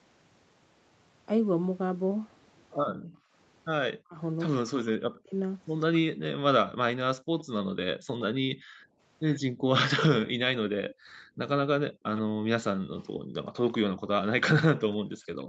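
From 2.89 to 6.24 s, the speech dips and breaks up in pieces. The deepest drops reach around 40 dB, and about a second and a half is affected in all. This is likely speech suppressed in double talk. Both sides spoke at once, and the echo canceller could not tell the local talker from loudspeaker echo, so it turned everything down.

From 7.21 s to the end, the background is gated by the echo canceller. The room sound falls away while the far side plays through the loudspeaker. The drops reach about 40 dB. The room returns whenever the canceller releases.

From 7.39 to 12.21 s, a faint delayed copy of the speech trails about 114 ms behind. It sits roughly 20 dB below the main speech. This is likely an echo leak. The echo canceller on a loudspeaker side missed part of what its microphone picked up and sent it back.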